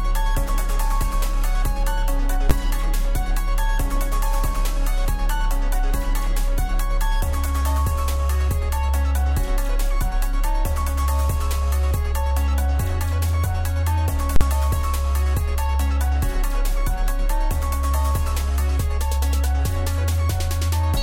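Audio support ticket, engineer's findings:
Invalid numbers at full scale, two events. A processing stage produced infinite or invalid values, which clamped to maximum positive or negative output for one block. At 2.50 s the block is about 12 ms, fitting a 512-sample buffer, and is heard as a single loud bang. From 14.36 to 14.41 s the block is about 46 ms, fitting a 2048-sample block, and is heard as hard pops at both edges with no sound between.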